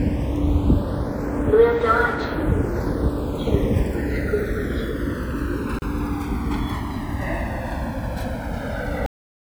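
A recording of sounds with three separate problems. Across the whole clip the channels are drifting apart: left and right look like they came from two devices on their own clocks, a couple of hundred parts per million off, so the offset between them creeps up to around a millisecond and a half by the end. Fold it to mono and the comb-filter notches from that tiny delay slide slowly through the spectrum, which comes across as a slow flange. At 5.79 s there's a gap at a join of encoded pieces, a hole of about 33 ms that opens right in the middle of continuous sound and then picks up exactly where it left off. That's the classic result of separately encoded chunks being butted together without trimming the encoder's start-up delay and last-frame padding, so that silence gets baked into the seam, with its edges a bit smeared by the codec. Then there's a cut-off end at 9.06 s: the sound just stops dead mid-event and drops straight to digital silence with no decay, and everything after that is empty. 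The final buffers evidently never got written out, so whatever was still ringing simply vanishes instead of fading.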